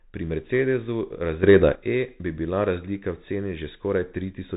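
From the very start, the speech has the narrowband sound of the Bluetooth CVSD headset codec, consistent with a 64 kbps stream. Nothing gets through above about 3.8 kHz, s sounds come out scratchy, loud bright bits distort where the adaptive step can't keep up, and a grainy hiss sits underneath.

Then, from 1.43 to 1.75 s, there's a sudden gain jump: speech and background noise leap up together by about 9 dB before dropping back. It's likely a digital gain change applied instantly, with no ramp.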